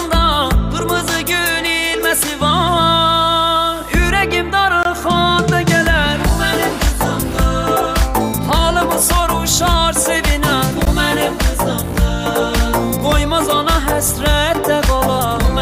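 The audio has two gaps at a join of encoded pieces. Silence of about 22 ms opens at 4.83 to 4.85 s, and about 16 ms at 10.85 s, six seconds apart. Separately encoded pieces were joined untrimmed, leaving encoder delay and padding. The sound resumes where it stopped.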